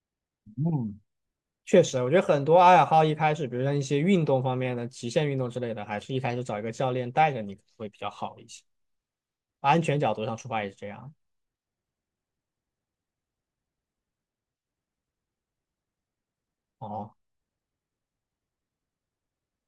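No technical faults are audible.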